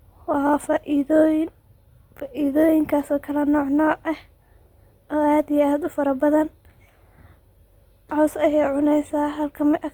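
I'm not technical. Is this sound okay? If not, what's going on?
No. The recording was most likely squeezed hard by Opus compression, which saves space by rebuilding fine detail with approximations. Throughout the whole clip, that leaves the speech plainly rough, grainy and noisy, especially on sustained tones, though the full treble range remains.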